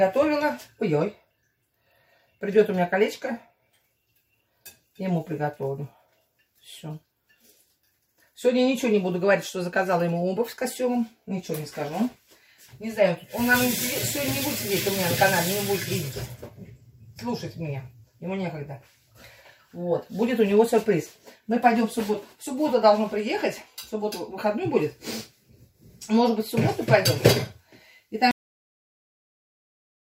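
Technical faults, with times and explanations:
28.31–30.15 s: cut-off end. The sound halts abruptly at 28.31 s and drops straight to digital silence for the final 1.8 s, with no decay or tail. The last buffers were never written or played out, so the signal ends mid-sound.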